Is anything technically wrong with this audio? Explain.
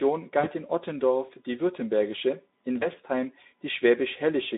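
Yes. VoIP packet loss concealed by the speech codec occurs twice, at 0.39 to 0.52 s (about 40 ms missing) and 2.79 to 2.88 s (about 20 ms). The decoder rebuilds each gap from its last pitch and filter at falling gain, so the speech briefly smears into a fading buzzy tone or coloured noise and stays weak or distorted just after, over the narrowband Speex line.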